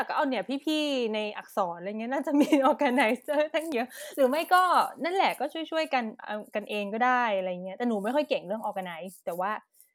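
A voltage spike, likely from a plug, switch or static discharge, was added to the signal path of this speech clip, producing a single loud pop from 3.72 to 3.75 s that stands roughly ten decibels above the speech, which continues underneath.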